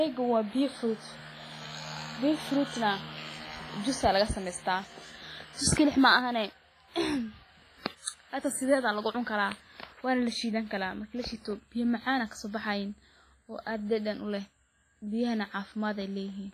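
From start to finish the speech carries heavy WMA compression damage, likely from a low-bitrate encode around 24 kbps. Quiet detail is stripped away. Transients ring and smear. A washy hiss swells and fades with the speech. Nothing remains above 15.5 kHz.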